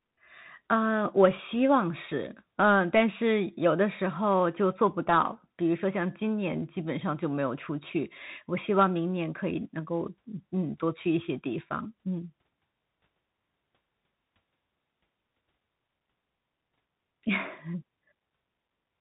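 Throughout, the speech went through a Bluetooth CVSD headset codec's one-bit delta coding. Nothing above 3.8 kHz survives, and granular hiss and scratchy s sounds are plainly audible.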